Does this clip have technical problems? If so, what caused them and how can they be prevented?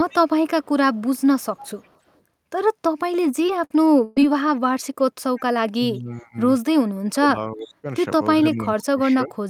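Yes, there are three kinds of problem here.

Echo leak shows up from 0.09 to 0.15 s, from 0.63 to 2.18 s, from 5.36 to 5.41 s and from 7.61 to 7.65 s. A faint copy of the speech comes back about 346 ms late, roughly 25 to 35 dB below the main signal. The likely cause is a far end on loudspeaker whose echo canceller lets some of the mic pickup through. A headset there, or better echo cancellation, would prevent it.

Repeated packet loss (robotic sound) runs from 3.11 to 4.24 s. There are four gaps, about 220 ms missing in total, and the longest is 121 ms. Each hole gets patched by stretching the last bit of sound, so roughly a fifth of that stretch is rebuilt and has that choppy feel. A steadier network path or a bigger jitter buffer would prevent it.

Speech suppressed in double talk hits from 5.74 to 6.37 s, from 7.14 to 7.87 s, and from 8.43 s to the end. The speech dips by roughly 20, 35 and 25 dB in those stretches. 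The likely cause is the echo canceller turning everything down while both sides talk at once, because it can't separate the local talker from the loudspeaker echo. An echo canceller with better double-talk detection would prevent it.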